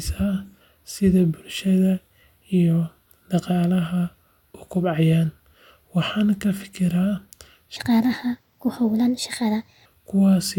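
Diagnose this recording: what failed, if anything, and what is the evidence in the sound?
From 7.76 to 9.86 s one section is at the wrong speed: the speech runs 1.37 times fast and rises about five semitones together, likely a resampling or playback-clock mismatch at the editing or playback stage. Tempo and pitch move jointly, which a pure pitch-shift would not do.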